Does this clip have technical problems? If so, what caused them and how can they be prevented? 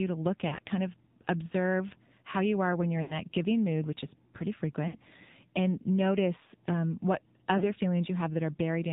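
Yes. The speech runs through an AMR narrowband mobile codec, at a rate that fits the 7.4 kbps mode. Its damage is plainly audible as buzzy, synthetic speech. On a spectrogram everything stops at a hard 4 kHz ceiling, and the harmonics look coarse and smeared. To prevent this, record or transmit with a wideband codec, or at a higher AMR mode.

There are four runs of lost AMR speech frames:
0.48 to 0.59 s, after "to look" and before "kind of observe how".
3.02 to 3.16 s.
4.88 to 4.98 s, after "mood which is pretty" and before "and notice um what".
7.58 to 7.64 s, after "and notice um what".

The decoder replays the last good pitch and vocal tract settings while turning them down. The sound is briefly stretched, then fades over the missing stretch. On a waveform this appears as an envelope that sags smoothly. On a spectrogram it appears as frozen, repeated harmonics dimming. To prevent this, improve radio coverage, or use a lower AMR mode with stronger error protection when the channel is poor.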